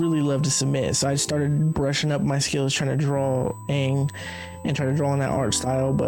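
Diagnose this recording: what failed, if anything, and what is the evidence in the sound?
USB whine runs through the whole recording as a steady, fixed-pitch tone at 8 kHz, sitting roughly 30 dB below the sound. It enters at the analogue wiring stage: the bus's 125-microsecond microframe current draw leaks through shared power or ground into the audio path.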